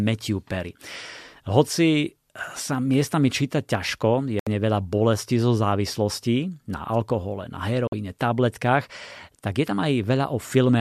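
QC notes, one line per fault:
4.39–4.47 s: digital broadcast dropout. The sound cuts to silence for about 72 ms as the receiver mutes corrupted frames, fitting three lost frames, then returns.
7.87–7.93 s: digital broadcast dropout. A shorter hole of about 48 ms, fitting two failed frames. The receiver mutes until good data resumes, so that stretch is lost.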